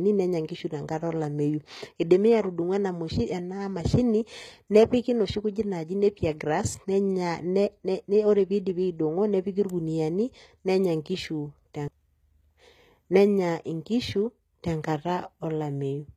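From start to finish the speech carries plainly audible codec damage, likely from HE-AAC compression at a very low bitrate, consistent with roughly 20 kbps. The treble sounds bright yet wrong: s sounds come out gritty and lispy, with a metallic sheen, because the upper band is copied up from lower frequencies rather than coded. Unlike a plain low-pass or ordinary low-bitrate smearing, the highs are present but synthetic, stopping near 14.9 kHz.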